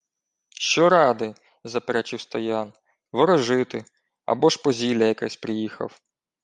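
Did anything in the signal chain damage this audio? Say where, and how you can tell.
Yes. At the codec stage, the whole speech clip has a breathy, grainy top end, likely from Bluetooth LC3 compression around 48 kbps with 7.5 ms frames, with the upper band partly noise-filled.

Over the network link, there are lost LE Audio frames at 0.69–0.71 s and 4.40–4.42 s, just before "ж по зілля якесь". Each gap smears for about 15 ms, which fits two frames concealed with a repeated spectrum.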